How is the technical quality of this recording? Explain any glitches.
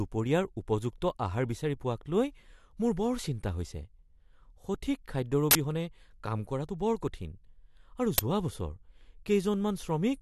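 The recording has two glitches of the same kind. An uninitialised buffer fault occurs at 5.51–5.55 s and again at 8.18 s. In each case a playback block was sent out before any audio had been written into it, so whatever data was left in that memory was played as if it were samples. The result is a sudden, loud burst of harsh digital noise lasting 40 ms at the first point, and a 10 ms loud crack at the second.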